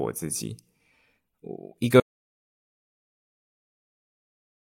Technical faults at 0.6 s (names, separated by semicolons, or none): none